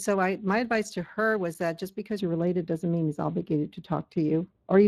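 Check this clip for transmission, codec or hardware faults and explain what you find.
Two faults are audible in this speech recording: Speex coding throughout, and a wrongly applied de-emphasis over the latter half.

Speex codec damage is present for the whole clip. This CELP coder spends limited bits on the excitation, so speech comes out noisy and hoarse, clearly so here, with nothing above 15.4 kHz. The character fits a middle-rate Speex stream of roughly 22 kbps.

De-emphasis applied wrongly affects the audio from 2.21 s to the end. A treble-cutting filter, meant to reverse pre-emphasis that was either never applied or already undone, tilts the response smoothly downward, about 11 dB lower at 10 kHz than at 1 kHz. The speech turns dull and muffled.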